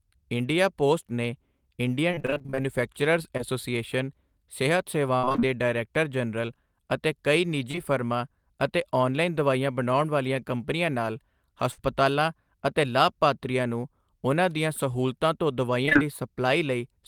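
Repeated packet loss (robotic sound) runs from 2.11 to 3.41 s. Around a dozen brief holes, none longer than 28 ms, were each patched by extending the preceding sound. About a fifth of that stretch is synthetic fill, so the speech turns choppy with pieces missing. The same fault returns from 5.17 to 5.42 s, denser this time. Roughly half of that span is concealed and one gap reaches 63 ms.

Short concealed packet loss follows at 7.71–7.75 s and again at 7.75–7.79 s. Two back-to-back 20 ms gaps were filled from the last pitch or noise and blended back into the real audio. They register as a quick smear or wobble in the speech.

A burst of packet loss at 11.71–11.80 s drops about 60 ms in one run. The decoder holds and fades the last sound across it, producing a brief buzz or hiss before the speech resumes slightly further on.

Repeated packet loss (robotic sound) recurs from 15.86 to 15.97 s. 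Three gaps of up to 20 ms cover nearly half that short span, leaving a short robotic flutter.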